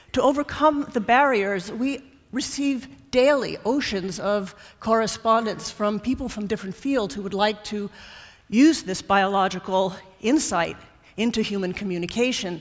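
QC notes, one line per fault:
No technical faults were found: the signal holds steady from its first sample to its last, with nothing that points to a problem in capture, processing or playback.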